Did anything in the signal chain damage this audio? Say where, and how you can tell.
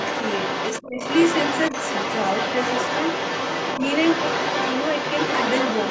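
Yes, in the call processing stage. Throughout the clip, from 0.0 to 5.9 s, a second voice sits under the main speech, only a little quieter than it. That is the other side's voice leaking through, likely because the echo canceller failed to strip the loudspeaker playback out of the microphone signal. The residue stays present the whole way.

From 0.81 to 1.0 s the main speech drops sharply, by a deep margin, for roughly a fifth of a second while the leaked voice is also active. This is speech suppressed in double talk: the echo canceller's suppressor, likely unable to tell its own talker from the echo, turned the whole microphone signal down. The speech sits within the call's normal band, with nothing above 8 kHz.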